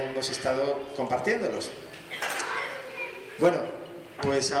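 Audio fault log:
No faults found anywhere in the clip.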